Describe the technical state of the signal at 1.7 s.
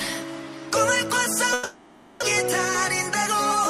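At 1.7 s the sound smears into a fading buzz from 1.53 to 2.24 s, then resumes with about 0.6 s missing, likely a long network dropout.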